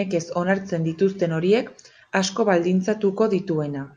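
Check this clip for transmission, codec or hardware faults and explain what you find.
Nothing in the speech points to a transmission, codec or hardware fault.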